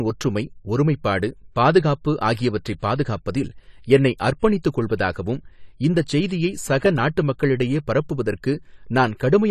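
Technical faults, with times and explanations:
Throughout, AAC compression: the speech sounds dull and smeared with a warbling edge and nothing above 14 kHz, likely from coarse AAC-LC quantisation at roughly 32 kbps.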